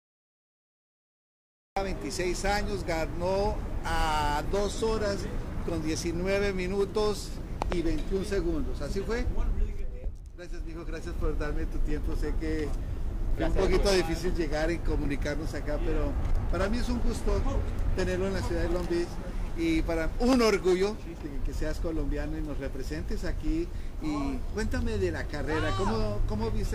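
The audio opens with digital silence until 1.77 s, then jumps in mid-sound with no attack or fade. This cut-off start means capture began late, unlike a gentle fade-in. At 7.62 s a loud pop arrives as two quick pulses ending by 7.74 s, and a single pop follows at 20.33 s. Each stands about 15 dB above the signal, likely from a plug, switch, static or driver glitch, and the sound continues underneath, unlike a dropout.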